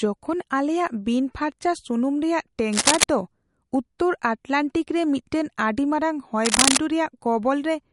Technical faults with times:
0.00-7.92 MP3 compression
2.72-3.04 cable scratch noise
6.45-6.77 cable scratch noise

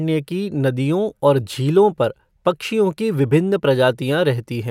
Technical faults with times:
none

